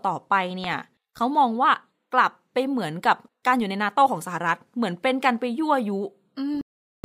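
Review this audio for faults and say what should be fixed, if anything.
Corrupt FLAC frame from 0.64 to 0.74 s: damaged bits inside the compressed data sent the decoder's prediction off course, so the speech is replaced by decoding errors peaking around -12 dBFS, spanning what sounds like two consecutive frames before clean audio resumes. Decoding with checksum verification enabled would catch this and allow the frame to be rejected or recovered rather than played out as noise.

Corrupt frame muted from 6.55 to 7.04 s: here the decoder rejected the damaged frames and the player filled their slot with silence, so the speech drops out abruptly into a hole about half a second long, which fits several consecutive frames, with timing preserved to the end. Storing or transmitting the file over a path with error protection, and re-fetching any frame that fails its check, would prevent the gap.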